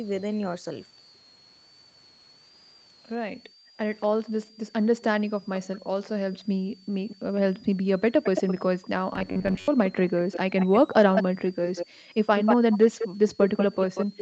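A switching supply whistle runs through the whole recording: a thin, high tone wandering between about 3.8 and 5.2 kHz and sitting mostly near 5 kHz, roughly 30 dB below the speech. It comes from a power supply whose switching frequency has fallen into the audible range.

From 3.33 to 6.92 s the background is gated by the echo canceller. While the far side's audio plays, the canceller pulls the microphone down by about 40 dB, so the room sound drops out in bursts totalling around a second and returns when it releases.

Overlapping this, an echo leak appears from 5.55 to 7.16 s. A copy of the speech returns 219 ms late, about 20 dB below the direct sound, likely because the far end's canceller let part of its loudspeaker pickup through.

From 7.20 to 7.25 s the speech is suppressed in double talk. It cuts out by about 40 dB for roughly 50 ms, likely while both sides are active and the canceller cannot tell the talker from the echo.

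A stronger echo leak begins at 8.23 s and continues to the end. The copy now lags by 188 ms and is only about 5 dB below the speech.

From 9.13 to 9.69 s the sound turns robotic from repeated short buffers. A metallic buzz at 93.8 Hz roughly follows the speech contour, which fits repeated chunks of about 10.7 ms standing in for roughly half the real audio.

Further gating by the echo canceller hits the background from 11.29 to 12.08 s and from 13.08 to 14.17 s. Each time the room tone dips by about 40 dB in brief pieces, totalling roughly 0.3 s and 0.2 s.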